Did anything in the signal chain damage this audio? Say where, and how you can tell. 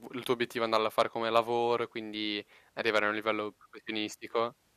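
No, nothing in this speech clip points to damage anywhere in the signal chain. No stage between capture and playback leaves a mark that can be heard or placed in time.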